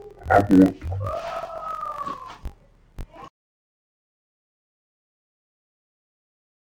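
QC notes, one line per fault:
Throughout, interleaved audio read as planar: the speech plays an octave low and doubled, with a choppy buzz at about 47 Hz, which fits 1024-sample blocks split wrongly.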